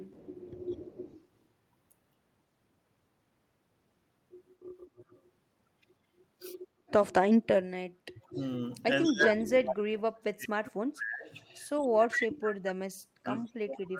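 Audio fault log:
0.00–1.21 s, 4.65–5.20 s, 8.27–9.33 s, 11.39–12.26 s, 13.45–13.51 s: echo leak. A copy of the speech trails the original by a fixed 192 ms each time. It is about 15 dB below the direct speech in the first and third spans, faint at about 30 dB down near 5 s, strongest at about 10 dB down around 12 s, and barely present at about 40 dB down in the brief scrap near 13.5 s. This is likely a far-end loudspeaker being picked up by its microphone and sent back because echo cancellation was incomplete.
8.3 s to the end: speech suppressed in double talk. From 8.3 s onward the loudspeaker-side talker's level dips, at worst by about 35 dB, so stretches of speech sound pumped down or drop out in pieces. This span overlaps the echo at 8.27–9.33 s and 11.39–12.26 s, which points to both sides talking at once. The likely cause is an echo canceller that could not separate the near talker from the loudspeaker return and attenuated both.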